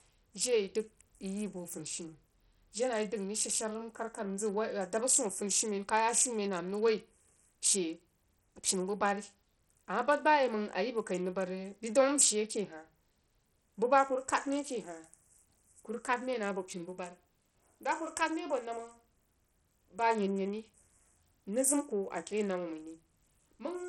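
Speech with heavy, gritty Bluetooth SBC compression throughout, likely from a low 64 kbps-like bitpool; a spectrogram shows flickering treble bands and nothing above 16.6 kHz.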